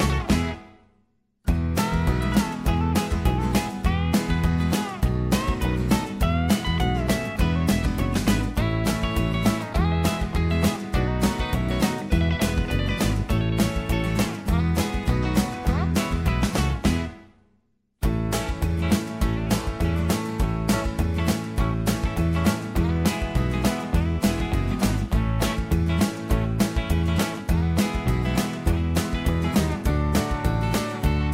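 No technical faults can be heard anywhere in this audio.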